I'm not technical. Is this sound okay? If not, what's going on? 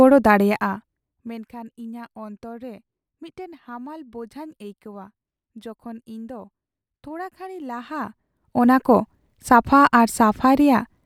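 No. There is zipper noise twice. From 0.34 to 1.52 s the speech gets much quieter. From 7.52 to 8.84 s it comes back up, just before "ᱠᱚ ᱥᱟᱯᱷᱟ". The volume moves in tiny jumps, about 50 a second. Each jump clicks, so you hear a buzzy zipping.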